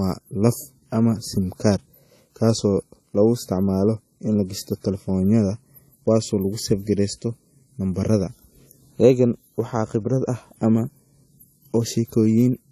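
Across the whole recording the speech carries two layers of coding damage at once: the artefacts of one codec, and a second set of artefacts riding on top, with nothing above 14 kHz. The likely cause is transcoding between lossy codecs. The sound points to an older WMA-style encode at a low bitrate, later re-encoded to AAC, which spent bits on the earlier artefacts and added its own.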